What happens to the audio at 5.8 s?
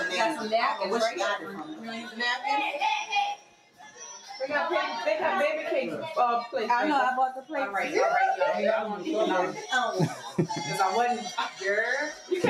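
At 5.8 s the sound is caught in a noise suppressor applied to music or sounds, which runs through the whole clip. A speech-tuned suppressor treats sustained tones and decaying tails as noise and pulls them down by around 5 dB while letting attacks through, so the level pumps and the tails thin out. On a waveform the envelope sags just after each onset; a spectrogram shows held partials and reverb fading patchily, with flickering gaps.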